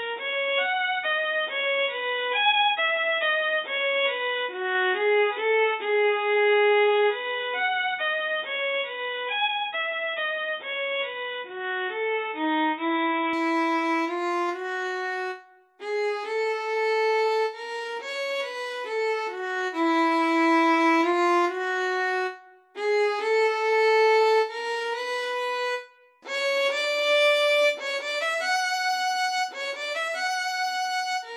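From 0.0 to 13.33 s the sound is boxy with nothing above 3.8 kHz, then abruptly clears with no gap. The changed noise floor points to a likely input switched to a poorer device, not filtering.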